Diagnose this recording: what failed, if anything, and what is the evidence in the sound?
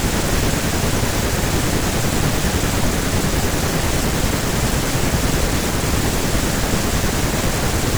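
Nothing failed; no fault is audible anywhere in the recording.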